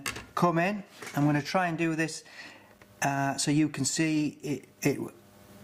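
At 2.78 s there is a gap between stream segments. The timestamps of two consecutive chunks of the stream don't meet exactly, leaving about 6 ms unaccounted for, and the player fills that space with digital silence. The result is a brief hole with abrupt edges on both sides, heard as a tiny click or dropout. Nothing is cut from the audio. The material on either side simply sits about 6 ms further apart than it should.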